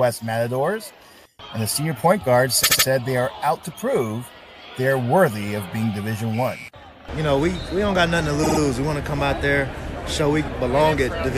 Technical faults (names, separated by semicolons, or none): repeated frames